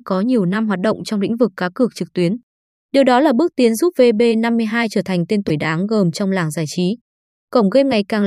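At 5.47 to 5.50 s and 7.90 to 7.93 s, the speech jumps with a brief glitch lasting about one 26.1 ms frame, likely a broken MP3 bit reservoir: after cut frames, the decoder borrows another frame's bytes. On a spectrogram each shows as a thin vertical disturbance.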